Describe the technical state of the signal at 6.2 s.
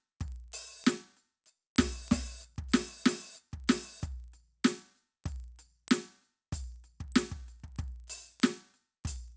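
At 6.2 s the music carries a steady ticking at 25 Hz. The fault is a resampler restarted on every block, and it runs through the whole clip. The audio was converted from 48 kHz to 16 kHz in separate 40 ms chunks. Each chunk was processed without its neighbours, so every boundary gets a small error. Those errors repeat as a buzzy tick that follows the music.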